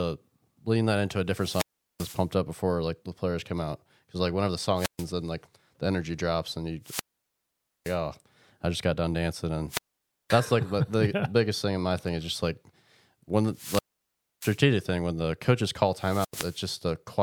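Speech with repeated wireless microphone squelch dropout: the FM radio link fades until the receiver's squelch cuts the output, giving a short burst of hiss or static, then a near-silent hole before the voice returns. Events fall at 1.30–2.29 s (after "lean that into a", mute about 390 ms), 4.76–5.07 s (130 ms), 6.82–7.99 s (after "energy drops and you", 870 ms), 9.68–10.37 s (530 ms), 13.51–14.63 s (before "thing when the coaches", 640 ms) and 15.93–16.68 s (90 ms).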